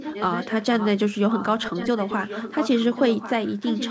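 An echo leak runs from 0.00 to 0.88 s and again from 1.17 s to the end. The far side was likely playing the call over a loudspeaker, and its echo canceller failed to strip what its microphone picked up, so that sound was returned down the line. A trailing copy of the speech arrives about 1.09 s late and roughly 10 dB quieter, overlapping the live speech as a delayed double.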